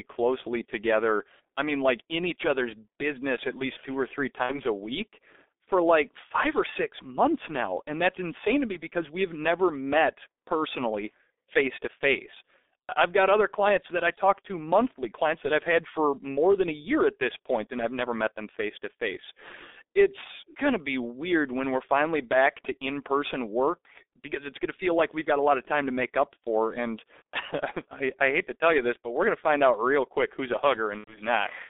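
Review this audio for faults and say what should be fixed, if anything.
The whole clip carries heavy G.723.1 codec damage. The speech is squeezed into a telephone band of roughly 300 Hz to 3.6 kHz, sounds muffled and hoarse, and its consonants smear because the coder's voice model updates only every 30 ms frame. The grainy, rough texture points to a very low rate near 6.3 kbit/s. That texture separates it from simple band-limiting, which would dull the sound without making it hoarse. To prevent it, send or record the audio with a wideband, higher-bitrate codec.

VoIP packet loss concealed by the speech codec occurs at 4.43 to 4.61 s and again at 30.99 to 31.19 s. In each gap the decoder keeps repeating its last pitch and filter at falling gain, so the speech turns into a fading buzz or coloured noise. The sound stays weak for a while after real data returns, because each frame builds on the previous one. 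The missing stretches, about 60 ms and 90 ms, fit two and three lost 30 ms frames. That smooth fade separates this from a plain dropout, which would be abrupt silence or a click. To prevent it, stabilise the network path and add a jitter buffer or forward error correction.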